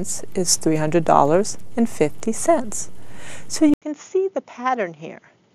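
At 3.74 s the sound changes character and stays that way to the end. A short gap of 80 ms marks the change. After it, nothing above 7 kHz comes through, so the top end is gone and the sound turns duller. The level falls by around 10 dB. A new background noise appears, sitting roughly 45 dB under the signal. This points to the input having likely switched to a poorer device mid-recording.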